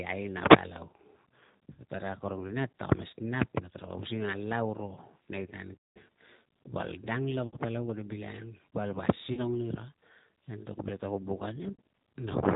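Throughout the speech, the sound is band-limited, with nothing above about 4 kHz, and has a rough, slightly synthetic buzz that is plainly audible. This is the G.729 codec at 8 kbit/s, which fits the G.729A variant. It does not carry the waveform itself. It rebuilds each 10 ms frame from a vocal tract filter, a pitch predictor and a few pulses, so the texture and all the top end are lost.

At 1.73 s the voice smears into a short buzzy tone or coloured noise that fades. This is VoIP packet loss concealed by the speech codec: about 60 ms of audio went missing, and the decoder extended its last pitch and filter at falling gain. The longest gap follows "nei tan" at 5.74 s. There, about 220 ms is stretched into a dwindling tone or noise, and the voice returns weak or distorted after about 5.97 s. Between "val dang" and "palau kate bilangang", at 7.47 to 7.57 s, 60 ms is bridged the same way. 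Another 40 ms is filled at 9.33 s, and 60 ms after "ta kuo buk a" at 11.73 s.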